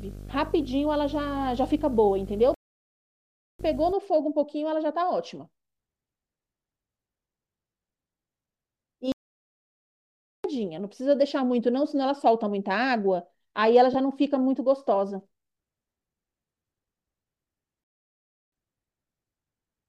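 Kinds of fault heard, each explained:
Video or display buzz: Interference from a screen or video cable leaks into the audio path, giving a 50 Hz field-rate buzz with hash above it and a 15.6 kHz line-rate whine. It sits about 10 dB below the speech from the start to 3.9 s.
Playback stall: The speech cuts to silence mid-flow, then resumes. This happens at 2.54 s for 1.05 s, at 9.12 s for 1.32 s, and at 17.84 s for 0.69 s. The likely cause is the player running short of data or its thread being blocked.
Lost LE Audio frames: Brief dropouts in the Bluetooth LE Audio stream are concealed by the LC3 decoder, which repeats the previous spectrum with randomised signs. This produces a short noisy smear at 7.17 s, lasting 7.5 ms, and at 13.93 s, lasting 15 ms.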